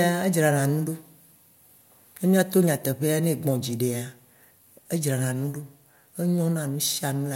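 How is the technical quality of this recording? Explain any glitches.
Nothing here trips me up: the speech comes across steady and intact, with no glitches to point to anywhere in the recording.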